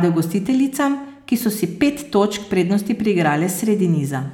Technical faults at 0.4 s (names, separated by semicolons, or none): none